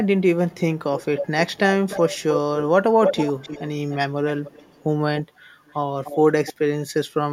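It's a speech clip with an echo leak: a copy of the talker trailing about 0.3 s behind at 0.51–0.61, 0.96–2.64, 3.05–3.96, 4.29–4.83 and 5.17–6.53 s. It's faint early, nearly as loud as the speech mid-clip, and quieter toward the end. That's likely a far-end speakerphone whose echo canceller isn't fully cleaning up its microphone pickup.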